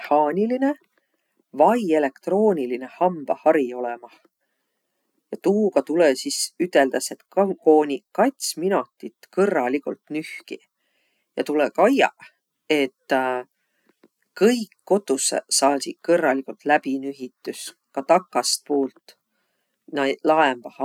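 No technical faults can be heard anywhere in this speech recording. There is nothing to mark at any point in time and nothing that went wrong to describe.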